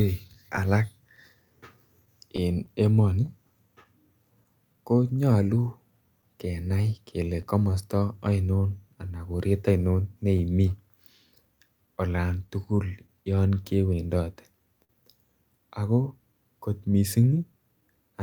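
Small timing hiccups recur at uneven intervals from start to finish, a faint unsteadiness in the pacing rather than any single obvious break. This is clock drift between sender and receiver. The sender's audio clock runs roughly 3 percent slow relative to the receiver's, so the jitter buffer keeps draining. The receiver has to keep stretching what it has.

From 0.27 to 5.36 s the speech picks up a scatter of brief ticks and tiny smears, more than a dozen, none longer than about 20 ms, with only a few percent of the stretch affected. These are scattered short gaps. Packets arrived late or went missing one at a time, and the receiver covered each hole by extending the last bit of sound. The speech stays clear around them.

Starting at 0.86 s and running to 18.11 s, the tempo sounds very slightly dragged and uneven, with occasional soft hiccups where a short piece seems repeated. These are repeated timing corrections. 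To stay in step with the slow sender, the receiver keeps inserting small repeated fragments, all in the same direction but unevenly spaced. Playback runs at 99 percent speed and gains around a fifth of a second in total.

The same scattered short gaps return as light ticks and smears in four more stretches. From 6.22 to 7.74 s there are a handful of them, each about 10 ms. From 9.49 to 10.72 s there are a few of similar size. From 11.87 to 14.91 s there are several, and the longest, around 50 ms, is the longest gap in the clip. From 16.91 to 17.83 s a few brief ones close it out. Each time, late or lost packets were patched by continuing the preceding sound.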